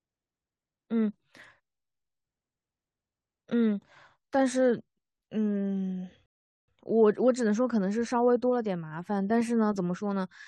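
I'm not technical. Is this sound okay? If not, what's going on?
No, there's one hiccup. At 6.26 s the speech cuts to silence for about 0.42 s, then picks up at 6.68 s exactly where it left off. That's a rebuffering stall: the player ran out of downloaded audio and waited for more. Nothing's missing, just a pause.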